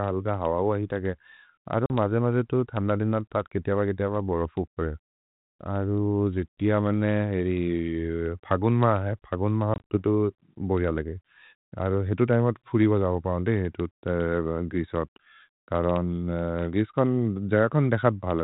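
At 1.86 to 1.91 s, just before "मजे मजे तु थन्द", there's packet loss on the ADPCM call: a 40 ms hard-edged hole, then slightly distorted speech as the decoder's predictor falls out of step. At 9.74 to 9.97 s, after "मा है फगोन् मा", a handful of gaps totalling 100 ms, the longest 40 ms, leave choppy, briefly distorted sound.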